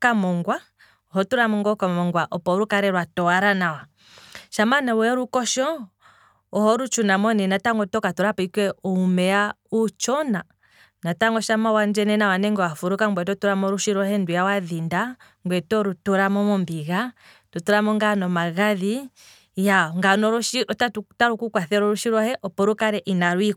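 Speech, with nothing technically wrong to point to at any time.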